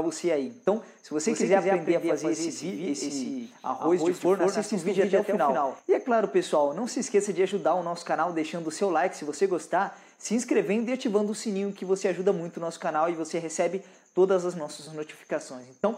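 From 1.25 to 5.79 s a doubled audio track appears: a full-level copy trails roughly 150 ms behind, likely from a second capture path, starting and stopping abruptly.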